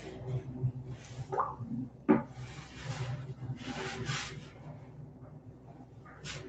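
Throughout, the sound pumps and thins as its level swings by roughly ten decibels, because a noise suppressor built for speech was left on and treats steady parts of the sound as noise. From 1.9 to 2.08 s, and again from 4.75 to 6.01 s, the sound sinks by up to about 4 dB where the noise suppressor turned it down.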